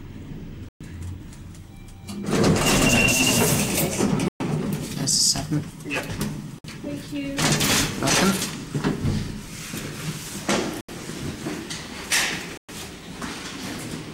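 The sound drops to dead silence five times: at 0.69 s for about 120 ms, 4.28 s for 120 ms, 6.59 s for 57 ms, 10.81 s for 77 ms, and 12.57 s for 113 ms. Each gap is likely a Bluetooth stall, where interference delayed packets and the headphone buffer ran empty until they arrived.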